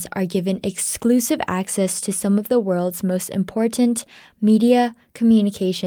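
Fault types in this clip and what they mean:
No faults can be heard anywhere in this recording.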